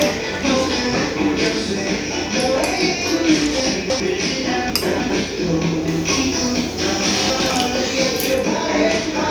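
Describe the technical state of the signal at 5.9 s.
At 5.9 s the signal has pre-emphasis left on: a treble boost applied for recording or transmission never received its matching de-emphasis cut, and this lasts from 5.88 to 8.34 s. The shape of the lift fits the 50/15 µs CD emphasis curve, with high frequencies standing about 8 dB above 1 kHz by 10 kHz. The sound over that span turns thin, overly bright and hissy, with sharpened sibilant edges.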